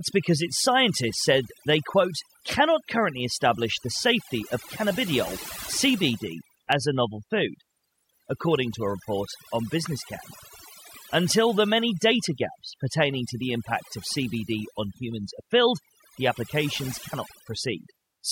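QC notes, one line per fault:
Throughout, overdone noise removal: an aggressive noise reducer pulls individual frequency bands hard down whenever they sit near its noise estimate, so the background drops and breaks into twinkling specks while quiet parts of the speech vanish. On a spectrogram, the background shows as scattered isolated dots and the speech harmonics look ragged and gapped.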